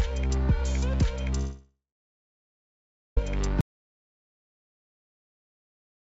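Audio carried over a call link, band-limited to nothing above 8 kHz in the way a wideband codec such as G.722 would leave it, with two breaks. From 1.38 to 3.17 s a likely long network dropout stops packets arriving. The receiver stretches the last sound into a fading buzz or hiss, then about 1.34 s of silence, and the audio resumes with that stretch gone. At 3.61 s the input feed is cut, a likely audio dropout to silence, and silence is written through to the end, leaving a gap with no room tone.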